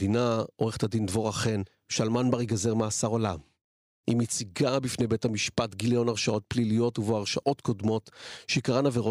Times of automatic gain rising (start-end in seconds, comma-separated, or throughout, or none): none